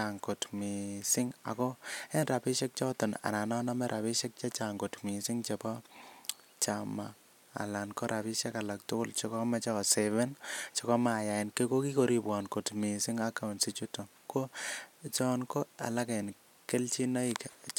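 Listening to the speech in this recording, nothing stood out as a technical problem at any point.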